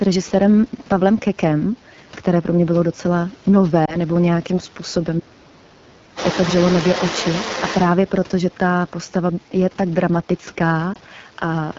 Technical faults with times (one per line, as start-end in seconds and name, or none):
0.00-11.79 AMR wideband (HD Voice) codec
3.86-3.96 lost AMR speech frames
5.18-5.93 speech suppressed in double talk
6.15-7.90 other side's voice leaking through
10.93-10.97 lost AMR speech frames